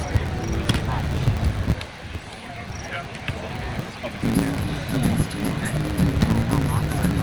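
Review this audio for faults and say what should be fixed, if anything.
A steady buzz at about 109 Hz runs under the sound for the whole clip, and everything plays roughly 1.16 times too fast while keeping close to its normal pitch. This is a block size mismatch (truncated): one stage hands over longer blocks than the next stage takes in, which fits 512-sample blocks being written, so the tail of every block is dropped. Those regular cuts create the buzz at the block rate and shorten the audio by the ratio of the two sizes. To prevent it, make both stages agree on one block size, or place a buffer between them that holds leftover samples instead of discarding them.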